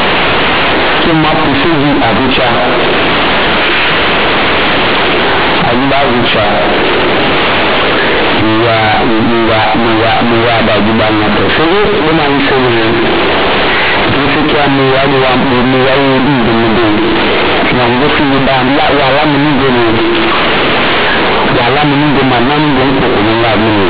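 Throughout the speech, A-law companded bytes are read as linear 8-bit samples without expansion, giving loud buzzy distortion, quiet passages as large as loud ones, and heavy noise in pauses.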